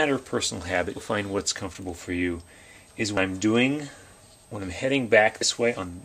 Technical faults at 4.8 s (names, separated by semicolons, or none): none